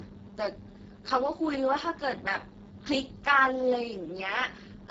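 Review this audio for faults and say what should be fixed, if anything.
Speex codec damage runs through the whole clip. The speech sounds hoarse, buzzy and near-robotic, as the coder has too few bits for the excitation, which fits a very low setting around 6 kbps. A spectrogram shows smeared harmonics, noise-like fill above 4 kHz, and nothing above 7.7 kHz. To prevent it, record or transmit at a higher-quality setting, or use a modern codec such as Opus.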